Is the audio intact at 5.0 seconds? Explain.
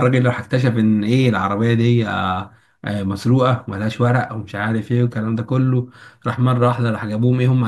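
Yes, at 5.0 seconds the speech runs on cleanly with no dropout, click, distortion or other audible fault.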